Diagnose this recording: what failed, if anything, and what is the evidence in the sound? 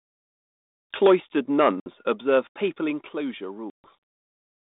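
Microphone overload at the converter: the loudest peaks flatten into a harsh, crackly edge at 1.05 to 1.14 s, pushing about 7 dB past full scale with a good chunk of samples cut. A milder touch follows at 2.34 to 2.37 s, roughly 1 dB over. The input gain was likely set too high.

Microphone volume stepped down, a call-processing stage: level and background drop abruptly at 1.07 s by about 4 dB, at 2.07 s by about 5 dB, and at 3.09 s by about 4 dB. That looks like automatic gain control cutting the device's input in single steps, the first one landing right inside that clipped burst.

Packet loss on an ADPCM call, a network fault: there's a hard-edged silence at 1.80 to 1.87 s, about 60 ms gone, and a longer one at 3.70 to 3.88 s, about 140 ms, which fits a few packets, then several, going missing. The 32 kbit/s G.726 decoder's predictor and step size drift from the sender's, so the audio comes back slightly off before settling.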